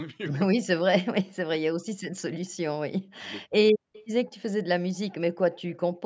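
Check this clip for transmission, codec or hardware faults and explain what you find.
Two call-path faults are present.

Speech suppressed in double talk occurs at 0.53–0.71, 1.59–1.91, 2.11–2.23, 3.19–3.26 and 3.45–3.78 s. The speech dips sharply, sometimes nearly vanishing. An echo canceller likely muted it while both sides talked.

Echo leak appears at 3.93–4.03 and 5.70–5.77 s. Faint scraps of speech return 192 ms late, well below the main level. Loudspeaker pickup likely slipped past the canceller.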